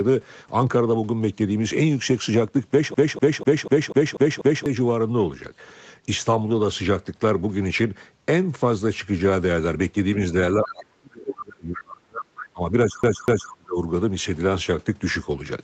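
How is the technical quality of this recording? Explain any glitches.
The recording has three distinct problems, and they stack up in the second half.

The first is a CD stuck on one turn, from 2.94 to 4.66 s. A 245 ms slice of speech repeats seven times with a tiny mute at each jump, like a scratch kicking the laser back one track every revolution. It returns briefly at 13.03 to 13.52 s for two more loops.

The second is speech suppressed in double talk, between 10.57 and 13.78 s. The talker's voice dips, thins and drops out in pieces, about two seconds in total, bottoming out around 30 dB down. The likely cause is an echo canceller that couldn't untangle the talker from the far end and ducked both.

The third is the other side's voice leaking through, in three short scraps: at 10.63 s (about 80 ms, roughly 10 dB under the speech), at 11.75 s, and at 12.39 s (both around 15 dB down). They are most likely loudspeaker echo the canceller didn't fully remove.

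For reference, nothing is present above 8 kHz, which fits the Opus call path's bandwidth.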